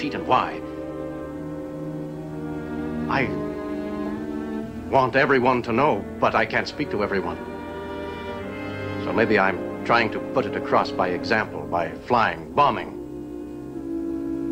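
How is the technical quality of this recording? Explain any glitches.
One glitch stands out: a single sharp click at 4.99 s. It is a dropped-samples fault. The sound doesn't stop or lose any audible content; instead there is one brief tick. The likely cause is a handful of samples, well under a millisecond's worth, going missing from the stream, so the waveform jumps abruptly from one value to a later one. On a waveform that shows as a step discontinuity; on a spectrogram, as a thin vertical line spanning the frequency range at that instant.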